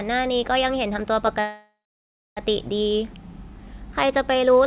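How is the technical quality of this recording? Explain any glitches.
There's one real glitch here, sitting on top of a narrowband call sound that tops out at about 4 kHz, which fits G.711 A-law telephone audio. From 1.4 to 2.4 s you get a call audio freeze, likely from packets getting held up so the jitter buffer ran dry. The receiver stretches the last bit of sound into a fading buzz or hiss, then about 0.64 s of near-silence, and the speech picks up right where it left off. Nothing's lost, but everything after arrives about a second late.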